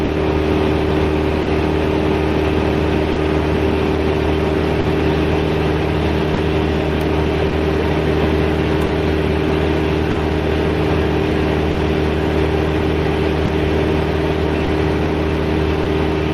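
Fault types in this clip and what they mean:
Clock drift between sender and receiver: the sender's clock runs about 2% slow, so the buffer keeps draining and you get small timing hiccups at uneven spots throughout.
Scattered short gaps: around ten lost packets across nearly the whole clip, each patched by stretching the last sound, leaving brief smears or ticks, the longest roughly 40 ms.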